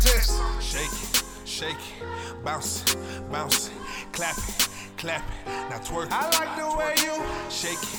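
No dropouts, clicks, distortion or other transport or processing faults can be heard anywhere in the audio.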